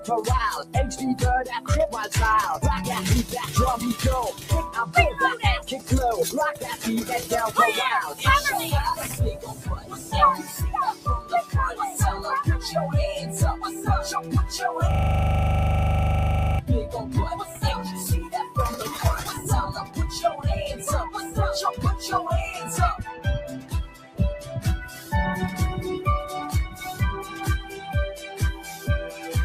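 A noise suppressor applied to music or sounds runs throughout, mistaking steady tones, ambience and tails for noise, so the level pumps by roughly 10 dB. Sound cut by the noise suppressor appears at 0.00–1.69 s, 4.32–11.54 s, 17.43–21.30 s, 23.10–25.13 s and 26.68 s to the end: held or fading material sinks by about 12 dB, about 13 dB at 23.10 s and about 8 dB in the last stretch, while sharp onsets pass. A system hang loop at 14.91–16.59 s repeats one 40 ms slice 42 times, giving a rigid 25 Hz buzzing stutter as the hardware kept cycling its buffer.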